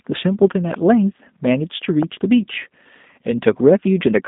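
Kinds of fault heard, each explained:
G.729 codec: The speech sounds thin, slightly rough and synthetic throughout, confined to about 150 Hz to 3.7 kHz with nothing above 3.8 kHz. This fits 8 kbit/s G.729 coding, which rebuilds each 10 ms frame from a vocal-tract filter, pitch predictor and sparse pulses.
Loud pop: A single sharp pop at 0.74 to 0.76 s stands out, about 10 dB above the speech, which carries on beneath it. The likely cause is a sudden voltage step or pulse, such as static, a switch or a driver glitch, added to the signal.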